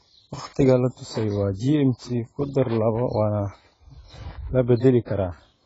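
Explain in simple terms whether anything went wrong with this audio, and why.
From start to finish the speech sounds dull and smeared, with a watery, fizzy edge on hissy sounds and nothing above 7.7 kHz. That points to heavy AAC compression, likely squeezed hard. A simple treble cut would sound muffled but clean, without this fizz.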